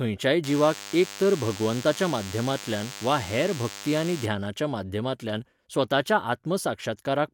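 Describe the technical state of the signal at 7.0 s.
Nothing at 7.0 s points to a technical fault; the speech signal there is intact.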